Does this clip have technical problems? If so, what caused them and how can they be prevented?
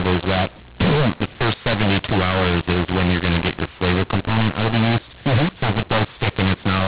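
Yes. Throughout the clip, mu-law and A-law are mixed up: the telephone audio was coded with G.711 A-law but decoded as mu-law. Levels get scrambled and quiet samples are pushed above silence, so the speech sounds harsh and distorted, and the pauses fill with noise. The underlying 4 kHz telephone band is intact. To prevent this, make sure both ends agree on the companding law, either by signalling it explicitly or by checking the codec setting before decoding.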